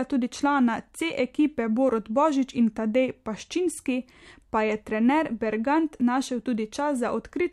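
No technical faults are audible.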